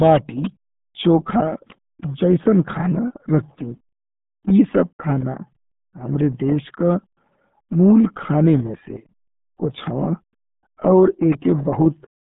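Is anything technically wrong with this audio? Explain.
Yes. Throughout the speech, it has passed through the RealAudio 14.4 codec, squeezed to a rate that fits roughly 8 kbit/s. The band runs about 150 Hz to 3.7 kHz with nothing above 3.8 kHz, so it sounds muffled and gargly, with heavy coding damage.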